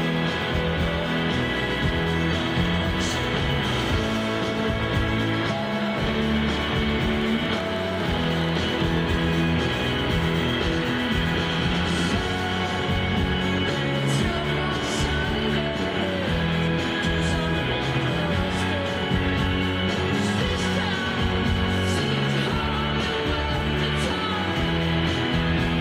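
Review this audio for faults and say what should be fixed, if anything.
A train of clicks runs from 7.22 to 8.82 s, with around fifteen similar pulses at about 10 per second, unevenly spaced and roughly as loud as the sound. The clicks likely come from interference or a faulty connection or power supply, and their repeated shape separates them from random crackle. To prevent it, keep cables away from nearby equipment and check the interface's stability.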